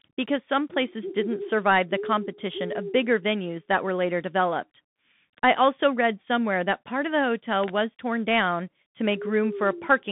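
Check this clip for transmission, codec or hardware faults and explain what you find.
One codec fault runs through the whole recording: Bluetooth CVSD headset coding. The speech sits in a narrow band from about 150 Hz to 3.6 kHz, with nothing above 3.8 kHz. CVSD sends one bit per sample, saying only up or down, and adapts its step size. That fits the 64 kbps headset link. Loud, fast-rising sounds outrun the step and distort. S sounds turn scratchy, and a granular hiss lies under the speech. The damage is plainly audible.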